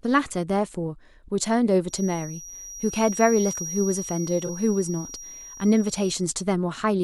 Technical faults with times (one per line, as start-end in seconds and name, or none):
1.85-6.28 feedback whistle
4.46-4.50 corrupt frame concealed